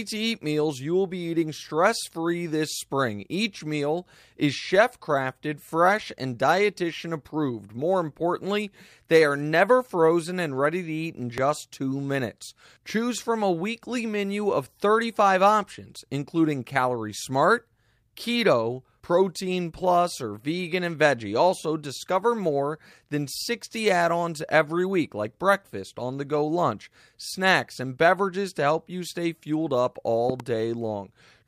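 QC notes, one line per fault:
11.38–11.40 s, loud pop: a sudden voltage spike, likely from a plug, switch or static discharge, entered the signal path and was shaped by the following circuitry into a single sharp pulse peaking around 15 dB above the speech. It sounds like a hard click-thump between "ready to eat in" and "two minutes", with the speech continuing underneath.
30.30–30.42 s, loud pop: a second electrical disturbance, likely a brief driver or connection glitch, added two pulses in quick succession, peaking around 15 dB over the speech. Just after "you stay fueled up" it is heard as a double pop, with the speech still running beneath it.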